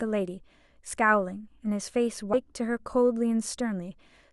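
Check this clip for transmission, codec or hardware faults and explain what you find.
A stream segment skipped at 2.33 to 2.36 s: the speech jumps abruptly ahead with a brief blip. The likely cause is one segment of the segmented stream failing to load, so the player dropped that stretch and continued from the next segment.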